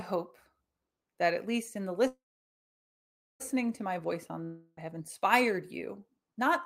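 At 2.07 s the speech hits a call audio freeze: the last sound smears into a short fading buzz, then about 1.2 s of silence until 3.42 s. Nothing's lost. The talk picks up right where it stopped, now 1.3 s late, likely from packets stalling and the jitter buffer running dry.

From 4.44 to 4.79 s there's a long network dropout. The sound stretches into a decaying buzz that lasts almost the whole gap, with barely any real silence. When audio returns, about 0.32 s of speech has simply gone missing, likely because those packets never arrived.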